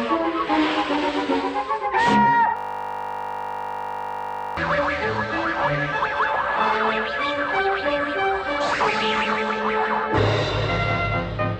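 From 2.57 to 4.57 s, a system hang loop: the machine froze while the hardware kept replaying one 20 ms buffer, producing a steady 50 Hz buzz.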